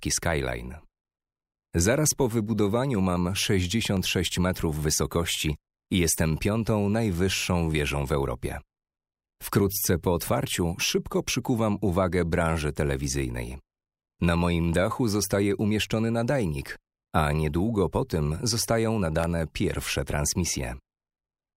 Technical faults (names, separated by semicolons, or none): clock drift buffer slips